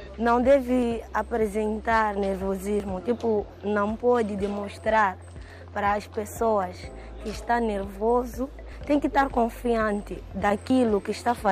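At 2.8 s the sound skips forward. A short stretch, about 30 ms, is gone, and the audio on either side is butted straight together with no gap. The same skip comes again at 10.7 s. This is audio missing between chunks. The likely cause is a recorder or processor handling the sound in 2.0 s blocks and dropping a sliver each time it closes one block and opens the next.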